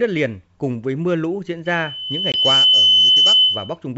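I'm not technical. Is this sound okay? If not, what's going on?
No. Two faults can be heard.

The first is loudspeaker feedback squeal. Starting at 1.65 s, right after "với mưa lũ diễn", a microphone is picking up the loudspeaker it feeds, and that loop keeps amplifying one pitch, here a high 3 kHz whistle. It grows over about a second until it sits well above the speech, and it lasts until 3.76 s. Turning the speaker down or moving the microphone away would break the loop.

The second is packet loss on an ADPCM call, at about 2.32 s, while the squeal is still sounding. A 20 ms piece of audio drops out to silence with sharp edges, which fits a single lost packet. This call uses G.722 wideband telephone coding, which predicts each sample from the ones before it. After the gap, the receiving end is briefly out of step with the sender, so the sound comes back slightly distorted before it settles.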